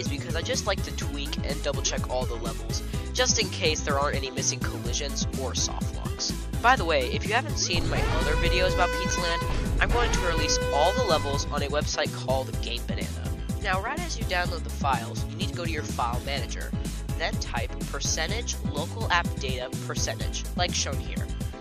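At 9.10 s the sound drops out to silence for about 6 ms, then resumes. This is likely a Bluetooth stall: radio interference delayed packets, the receiving buffer emptied, and playback halted briefly until retransmitted data arrived, leaving a short, abrupt gap.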